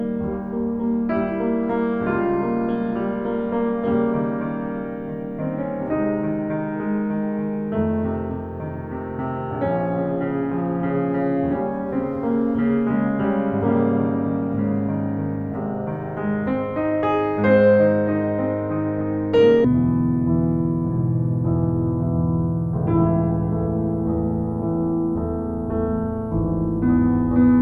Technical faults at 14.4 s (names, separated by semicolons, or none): none